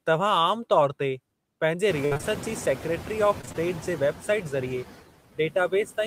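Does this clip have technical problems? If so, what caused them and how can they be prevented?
Yes. Throughout the clip the background pumps: it drops away between phrases and swells back under the speech. These are noise suppressor artifacts. The suppressor estimates the steady noise in each frequency band and pulls those bands down, by about 16 dB here, frame by frame. The effect is strongest after about 2 s, when the room noise rises by roughly 24 dB and then sits only about 13 dB below the speech. That leaves the suppressor working hard on every frame. To prevent this, reduce the room noise at the source or move the microphone closer, so the suppressor can run more gently.

From 2.05 to 2.25 s and again from 3.41 to 3.56 s, the speech turns choppy, with small pieces missing. This is repeated packet loss (robotic sound). In each stretch, several short holes in the stream arrived in quick succession, and each was patched by stretching the last bit of sound. 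In the first burst the holes total about 120 ms, the longest about 57 ms, and about 60% of the span is filled-in sound. In the second they total about 80 ms, about 47% of the span. To prevent it, use a more stable network connection with a larger jitter buffer or forward error correction enabled.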